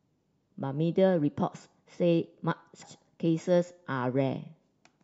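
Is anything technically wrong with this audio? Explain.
Yes. At about 2.81 s, compressed frames were skipped: roughly seven frames, each about 23.2 ms long, were lost or rejected by the decoder, so the speech jumps ahead by about 150 ms.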